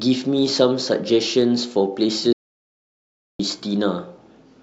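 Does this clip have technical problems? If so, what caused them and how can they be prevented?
Yes. The input feeding the recorder was likely lost for about 1.07 seconds, through a device disconnecting, a link failing or a mute being tripped, while the recording carried on writing silence. The result is an audio dropout to silence: the speech cuts off abruptly at 2.33 s and returns mid-flow at 3.39 s, with dead digital silence and no room tone between, so whatever was said in that stretch is gone. Prevention: secure cables and wireless links, and watch input meters during recording so a lost signal is caught immediately.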